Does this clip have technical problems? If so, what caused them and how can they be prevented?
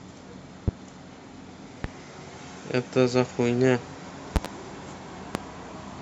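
Yes, there are loud pops at 0.68–0.71 s, 1.84–1.88 s, 4.36–4.48 s (a double pop) and 5.35–5.38 s, peaking roughly 20 to 25 dB above the speech. Each is a sharp electrical pulse, likely from a connector, switch, static discharge or driver glitch, added onto the signal. Unlike a dropout, the speech carries on underneath each pop. Prevention: secure cables and connectors, avoid switching or touching equipment while recording, and keep audio drivers stable.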